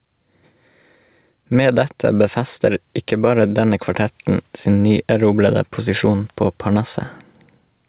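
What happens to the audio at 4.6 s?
At 4.6 s the clip is still showing gain pumping, which runs throughout: the input gain is likely set far too high, so a fast limiter keeps clamping it on loud sounds. The gain swings by about 5 dB under each loud sound, leaving the speech squashed.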